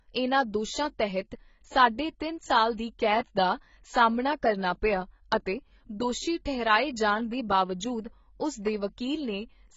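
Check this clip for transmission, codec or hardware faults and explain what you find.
One fault runs through the whole speech recording: heavy AAC compression artefacts. Nothing is heard above 7.5 kHz, and the remaining band sounds dull and smeared, with a watery, fizzy texture on sustained vowels and sibilants. The cause is likely an AAC-LC encode at a very low bitrate, consistent with something near 16 kbps. The encoder lowered its cut-off and starved bands of bits, leaving spectral holes that shift from frame to frame. Unlike a simple low-pass filter, this also makes the audio warble, not just lose its top end.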